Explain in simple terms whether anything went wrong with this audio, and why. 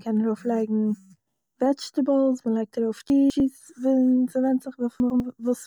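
Two chunks-out-of-order faults jumble the speech. Just after "וועדזשטעיבלס מען לייגט ארויף", from 3.1 to 3.4 s, a 100 ms piece plays two pieces late; at 5.0 to 5.2 s another plays one piece late. Nothing is lost, but the scrambled order sounds garbled.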